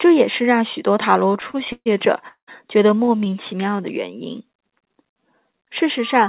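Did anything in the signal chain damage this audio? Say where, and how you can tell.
Yes. Network and jitter buffer first: repeated stalls (stutter) at 1.28–1.88 s, ten gaps up to 133 ms, then 3.05–3.34 s, five gaps. Late packets kept emptying the buffer.

At 2.28–2.49 s the sound hangs, fades, then goes silent for 100 ms before resuming. This is likely a call audio freeze from delayed packets.

Jitter buffer slow-down at 3.58–3.82 s. Pitch periods were repeated, adding 41 ms. The sound drags at 86% speed without changing pitch.

Loudspeaker feedback squeal from 5.98 s to the end. A 1.2 kHz tone swells to about 5 dB above the speech. Microphone and loudspeaker formed a loop.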